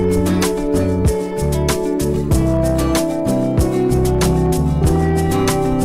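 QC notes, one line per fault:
Throughout: hard clipping. The signal reaches a gain stage or converter about 11 dB hotter than it can pass, so every peak above full scale is sliced flat, and around one sample in twenty sits on that ceiling. The squared-off tops add a spray of upper harmonics well into the high kHz range, which is heard as a harsh, gritty fuzz riding on each loud moment rather than occasional isolated crackles.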